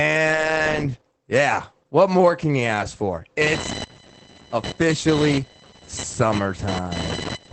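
A speech recording that sounds muffled and coarse throughout, with nothing above 8.5 kHz and plainly audible coding damage. That points to Opus voice compression in its SILK linear-prediction mode at wideband, which fits a low rate of around 12 kbps in 20 ms frames. From 3.41 s to the end, a buzzing, chirping or scratching noise pulsing roughly a thousand times per second sits about 10 dB below the speech. This is computer activity noise: processor, graphics or mouse load shifting the audio circuit's shared ground.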